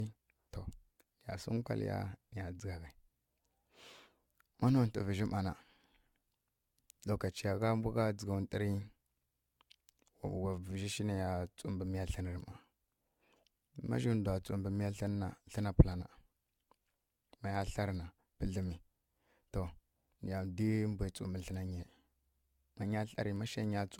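Generation loss runs through the whole speech clip. The sound is swirly, smeared and hollow, and attacks are blurred. Nothing remains above 17 kHz. The likely cause is repeated lossy re-encoding, about four passes, consistent with AAC at a moderate bitrate, each pass adding fresh quantisation damage.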